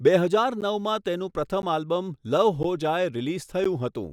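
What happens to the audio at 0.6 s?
At 0.61 s the speech drops out for a brief 12 ms hole, a gap between chunks. The audio was carried in 1.0 s chunks, and silence was inserted at this join rather than any sound being lost.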